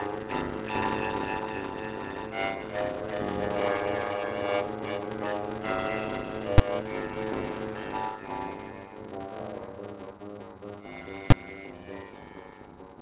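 Block size mismatch (padded) runs throughout the music. Short blocks, which fit 256-sample writes, are zero-filled to the reader's size. This gives a 100 Hz buzz and playback at 0.533 times normal speed, at roughly normal pitch. Beneath it, the call codec passes nothing above 4 kHz. Invalid numbers at full scale strike at 6.58 s and again at 11.31 s. A calculation produced invalid values that were pinned to maximum level for about 10 ms, heard each time as a single loud bang.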